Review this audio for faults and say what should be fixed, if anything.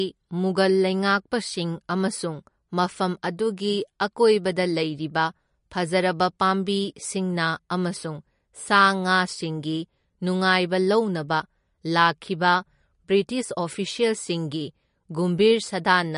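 Throughout the speech the treble stops dead at about 10.6 kHz, with watery, swirling texture and metallic chirps on s sounds. This is likely MP3 compression: starved of bits, the encoder cuts high frequencies and drops weak components that flicker between frames, which fits a low bitrate near 40 kbps. To prevent this, keep a lossless original and encode at a higher bitrate.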